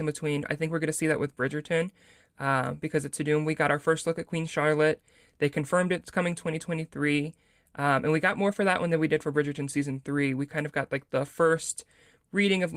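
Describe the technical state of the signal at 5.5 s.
At 5.5 s the speech signal is intact, with no dropout, clipping, glitch or other fault audible at that point.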